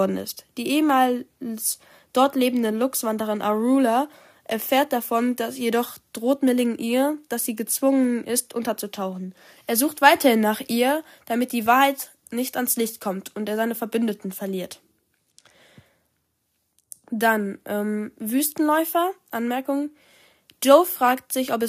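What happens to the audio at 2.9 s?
Nothing goes wrong at 2.9 s; the speech plays through that moment intact, with no dropout, click or distortion.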